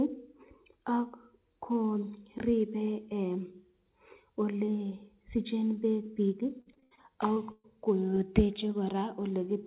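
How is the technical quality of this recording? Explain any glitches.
The recording has a cluster of packet-loss glitches in its final seconds, carried over a narrowband call link. Nothing is heard above 4 kHz, which points to a telephone-grade codec such as 64 kbps G.711 mu-law.

Repeated packet loss (robotic sound), 6.6 to 7.11 s: the speech turns choppy, with pieces missing. Five separate gaps, the longest 73 ms, removed about 200 ms in total. Each was patched by extending the preceding sound, so nearly half of this half-second is synthetic fill. The quick succession of patches creates the mechanical, robotic texture.

Short concealed packet loss, 7.34 to 7.38 s: a brief smear or wobble interrupts the speech. About 20 ms of audio never arrived in time. The receiver covered the hole by continuing the last sound, pitched if voiced and shaped noise if not, then crossfaded back into the real signal. 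Any very short sound in that moment may simply be absent.

Burst of packet loss, 7.52 to 7.66 s: the sound becomes a held buzz or fading hiss, then speech resumes further along. Roughly 120 ms went missing in one run. The concealment stretched the last sound while lowering its level, and it ended in about 10 ms of silence before real audio returned. Whatever fell inside that stretch is lost.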